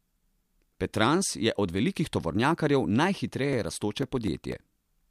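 From 3.28 s to 5.02 s the speech carries periodic USB or driver dropouts: a regular tick repeating every 0.25 s, roughly seven in all. Each time, something in the system stalls the USB link or audio driver briefly, and about a millisecond of audio is skipped, not padded with silence. The waveform jumps across the gap, leaving a small discontinuity heard as an evenly spaced click riding on the speech.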